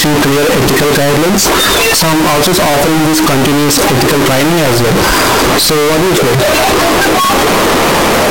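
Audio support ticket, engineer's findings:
Float read as integer, whole clip. Speech blasted to near-square waveform at an almost fixed, high level, start to end. Extremely loud, harsh, buzzy. Background noise as loud as the speech. Pitch still traceable. Likely cause: file or stream format mismatch, 32-bit float samples decoded as 32-bit integer. Sign and exponent bits dominate each sample value, so level no longer tracks the original. Fix the format flag or reader.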